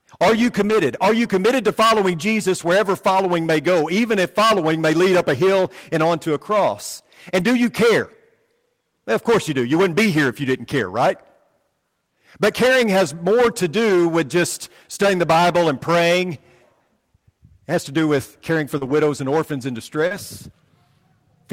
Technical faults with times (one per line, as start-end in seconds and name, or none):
0.00-21.52 hard clipping
0.69-0.71 lost packet rebuilt from error correction
7.39-7.45 lost packet rebuilt from error correction
13.89-13.91 lost packet rebuilt from error correction
15.01 lost packet rebuilt from error correction
18.77-18.83 short concealed packet loss
18.81-18.91 lost packet rebuilt from error correction
20.07-20.12 short concealed packet loss
20.10 lost packet rebuilt from error correction